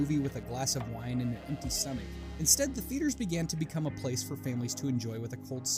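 Computer activity noise runs through the whole clip. Activity in the computer disturbs the shared ground of the audio circuit. The result is a faint buzzing, pulsing roughly 150 times a second. It sits low, around 35 dB below the sound, and follows the machine, not the audio.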